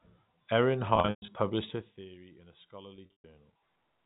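This speech clip has two bursts of packet loss with pitch repetition, at 0.96 to 1.28 s and at 2.96 to 3.24 s, right after "in a". Gaps totalling 220 ms and 180 ms, with runs up to 120 ms, were bridged by looping the last pitch period. This gives a held, buzzy tone that fades to silence before the speech cross-fades back. A spectrogram shows frozen, flat harmonic stripes dimming into blank patches, and the waveform shows identical cycles decaying.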